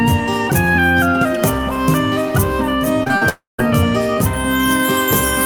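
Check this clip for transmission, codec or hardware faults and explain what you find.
The clip has two kinds of transmission fault, clustered just after 3 seconds.

Short concealed packet loss occurs three times: 3.03 to 3.08 s, 3.08 to 3.11 s, and 3.17 to 3.23 s. About 20, 20 and 40 ms of audio failed to reach the decoder in time. The receiver bridged each hole by extending the preceding sound, then blended back into real audio. Each one sounds like a brief smear or wobble.

From 3.29 to 3.60 s the sound is cut off. For the first part the last sound carries on and fades away. Then about 160 ms of near silence follows before the audio returns. About 300 ms of material is missing, and it never comes back. The likely cause is a long network dropout. No audio arrived for that stretch, so the receiver's concealment ran out and left silence.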